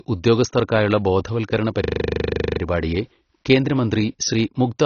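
Speech clip, band-limited throughout with nothing above 6.6 kHz and plainly audible dull, smeared codec damage, likely AAC compression at a low bitrate around 24 kbps. Right after "ഉദ്യോഗസ്ഥർക്കായുള്ള ബോധവൽക്കരണ", from 1.84 to 2.6 s, a system hang loop repeats one 40 ms slice 19 times at 25 Hz, with essentially no audio lost afterward.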